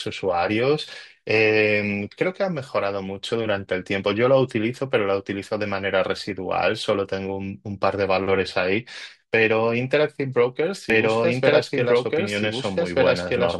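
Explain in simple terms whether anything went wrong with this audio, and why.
From 10.9 s to the end, a doubled audio track appears: a second copy of the same speech, about as loud as the first, trails roughly a second and a half behind and cuts in abruptly. This likely comes from the audio being captured twice.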